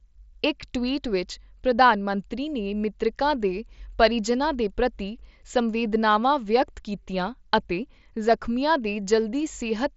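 No technical faults can be heard in the speech, which arrives over a wideband Bluetooth mSBC headset link that carries nothing above about 7.7 kHz.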